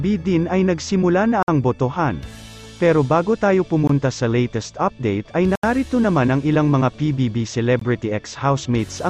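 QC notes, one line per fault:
1.43–1.48 s, block of digital silence: a 54 ms dropout to zero, likely an output buffer not filled in time, leaving a short hole.
3.87–3.89 s, block of digital silence: 20 ms gap.
5.55–5.63 s, block of digital silence: 80 ms, the longest, an audible hole.
7.79–7.81 s, block of digital silence: 20 ms gap.
Waveform shows flat stretches; spectrogram shows black vertical bands framed by broadband edge lines.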